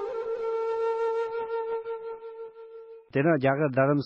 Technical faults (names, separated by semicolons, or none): adaptive stream at a lower bitrate